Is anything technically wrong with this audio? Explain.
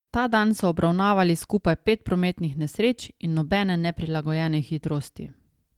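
No, nothing technically wrong stands out anywhere in this speech recording.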